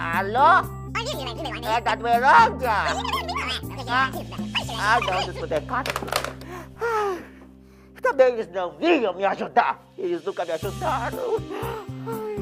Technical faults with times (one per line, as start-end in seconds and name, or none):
6.75 overlap between stream segments